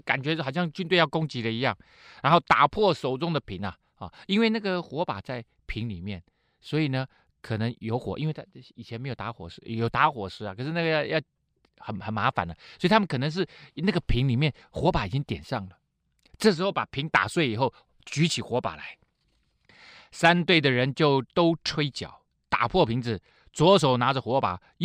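A speech clip with imaging from linear upsampling running the whole way through. The top of the band sounds dulled, and a faint mirrored copy sits between 12 kHz and 24 kHz, roughly 35 dB down, giving sibilants a light metallic shimmer. That fits a 24 kHz source doubled to 48 kHz by simple straight-line interpolation.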